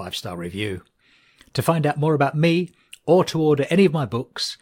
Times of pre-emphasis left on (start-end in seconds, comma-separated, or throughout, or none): none